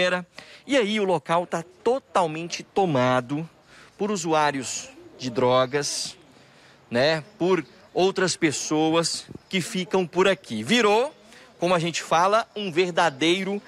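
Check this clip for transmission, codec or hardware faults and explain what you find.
One fault is present. Clock slip clicks run from 0.25 s to 13.63 s. Faint ticks recur about every 0.3 s. Unlocked clocks likely differ by roughly 70 ppm, slipping one sample each time.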